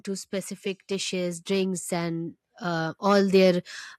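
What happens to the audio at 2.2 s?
The speech and the background noise behind it swell steadily together, climbing by about 11 dB between 0.88 and 3.7 s. This is automatic gain rising, a gain control slowly boosting input it judged too quiet.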